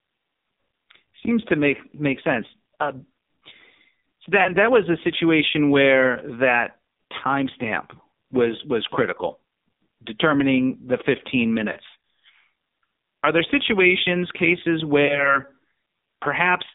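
AMR narrowband mobile codec throughout this speech recording: the audio is confined to roughly 150 Hz to 3.7 kHz and sounds heavily buzzy and synthetic, which points to a very low rate near 6 kbps. Lost AMR speech frames occur at 4.44 to 4.53 s (just before "that was a situation"), 9.36 to 9.40 s (just after "that timestamp was was"), 11.72 to 11.77 s, and 15.06 to 15.37 s (after "there situations cases"). At each of these points the decoder bridges about 20 to 40 ms of missing audio, consistent with one or two dropped frames, by repeating its last pitch and vocal-tract settings at falling gain, which produces a brief warbling dip before the voice returns weak or rough for a moment.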